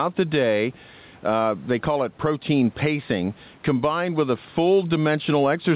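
Gain pumping runs through the whole clip: the level ducks by around 10 dB whenever the speech gets loud. The likely cause is microphone gain set far too high, with a fast limiter clamping every peak and squashing loud and soft passages together.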